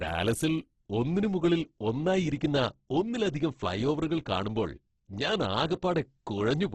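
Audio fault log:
Throughout, Opus compression (likely cause): the speech sounds rough and grainy rather than swirly, with heavy damage across the clip and nothing above about 12.2 kHz. That fits the music-style CELT mode starved of bits at a rate around 12 kbps. It keeps each band's overall energy but fills the detail with folded copies of lower bands or plain noise, so the voice keeps its shape while its texture turns coarse and hissy.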